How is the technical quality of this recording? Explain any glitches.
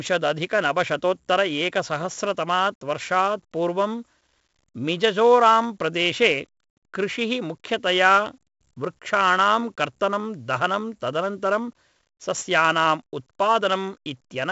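Pretty rough, honestly: the speech carries heavy 4-bit ADPCM compression from start to finish. Each sample is stored as a coarse 4-bit step off a prediction, so there's a gritty hiss riding every loud syllable, smeared attacks on consonants, and nothing above 7.7 kHz, which points to a 64 kbps stream at a reduced sample rate.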